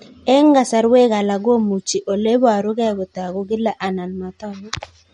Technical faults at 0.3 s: MP3 compression

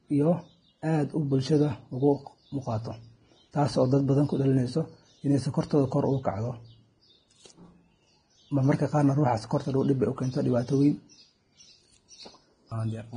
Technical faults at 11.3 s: Vorbis compression

